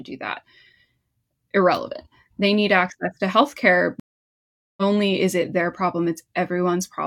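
At 4.00 s the speech cuts to dead silence for 775 ms, a stream reconnect: the connection dropped, and the player restarted its decoder mid-stream. At 4.83 s speech resumes roughly 0.7 s further on. The waveform shows a flat gap; the spectrogram, a blank vertical band.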